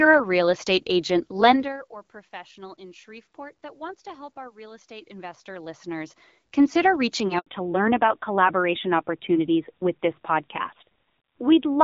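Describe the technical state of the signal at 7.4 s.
Right after "consider reaching" the speech drops out completely from 7.39 to 7.47 s, an 80 ms hole in which nothing at all comes through. This is a handover gap: the call was passed from one network link to another, and no speech frames arrived during the switch, so the decoder had nothing to play until the new link came up. Whatever was said in those 80 ms is gone.

When the sound returns at 7.47 s it is duller and rougher, and it stays that way through the end of the clip. This is a fallback to narrowband. Everything above 4 kHz has vanished, which removes the crisp sibilance and airiness that were present before the gap. That sound fits the call leaving HD Voice (AMR-WB around 12.65 kbit/s) for a narrowband AMR-NB codec around 7.4 kbit/s on the new link.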